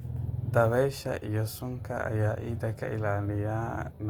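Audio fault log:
Throughout, Opus compression: the speech sounds plainly grainy and rough, with noise-filled texture where bands were rebuilt rather than carried, yet the bandwidth stays full, nothing above 20.2 kHz. This most likely comes from Opus music mode near 24 kbps.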